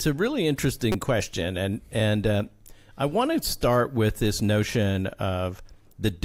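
This is a speech clip with one corrupt frame decoded. At 0.92 to 0.95 s a short glitch occurs, peaking at around -15 dBFS. Its 30 ms length points to a single damaged compressed frame. Flipped bits in that frame gave the decoder wrong gains or misread codes. It played the frame anyway. Energy landed at the wrong frequencies for that brief span.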